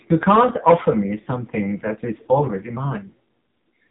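From the start, the speech passes through the AMR narrowband mobile codec. Nothing above 4 kHz survives, so the sound is thin and muffled. The damage is heavy. The voice is buzzy and synthetic, with a coarse, rasping edge. That quality fits a low AMR-NB mode near 5.9 kbps. At that rate the vocal-tract model gets very few pulses per subframe to rebuild each sound.

From 1.22 to 1.28 s, lost AMR speech frames break the flow. The gap is about 40 ms, which fits two 20 ms frames failing their checks. The decoder fills them by repeating its last good pitch and spectral settings at falling gain. The result is a brief smeared warble and a small dip in level. The voice then returns rough for a moment.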